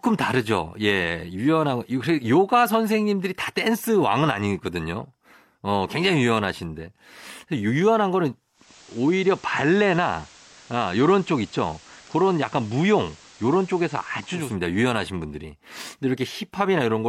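Speech recording with a digital radio blending to analogue episode: at 8.53 s the receiver lost its digital stream and cross-faded over about 250 ms to the station's FM feed, staying there until 14.57 s before fading back. During that stretch hiss creeps in, roughly 25 dB under the speech, and the level dips by about 1 dB.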